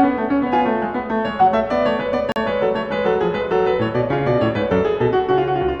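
At 2.32 s the music drops out for 40 ms, a block of digital silence. A block of samples became zeros, leaving a short hole from 2.32 to 2.36 s.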